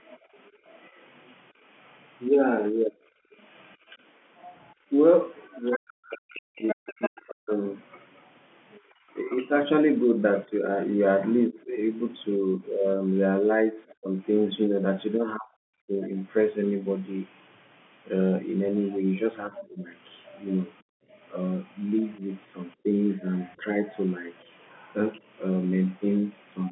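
A speech recording from a call, with echo-canceller trouble throughout. The other side's voice leaking through runs from 0.07 to 8.8 s and again from 13.89 to 26.69 s, at about 20 dB and then about 25 dB below the talker. It is likely loudspeaker echo that the canceller failed to remove. Unlike room reverberation, it is a separate voice rather than a tail on the talker's own sound. The background is gated by the echo canceller between 0.18 and 3.88 s, dropping by up to about 18 dB for under a second in total. It is gated again at 8.8 to 8.93 s (about 11 dB) and at 20.83 to 21.1 s (about 40 dB). Only the room sound dips, in short holes that return when the canceller lets go. The speech is suppressed in double talk between 2.28 and 16.13 s, with cuts as deep as about 40 dB totalling around five seconds, and between 19.49 and 23.83 s, with dips of about 20 dB totalling half a second. This is likely the canceller clamping down while both sides spoke. 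Unlike gating, here the talker's own voice loses its top or breaks into pieces.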